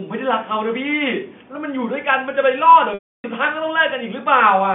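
Speech over a telephone-band line, with one packet loss with pitch repetition. From 2.94 to 3.24 s, about 300 ms of audio drops out. The receiver fills the start of the gap by repeating the last pitch period, so a brief held, buzzy tone appears. It fades within about 50 ms, leaving silence for the rest of the gap. The speech then returns through a short cross-fade. A 300 ms gap fits roughly 15 lost 20 ms packets. The G.711 line band, about 150 Hz to 3.5 kHz, is audible throughout.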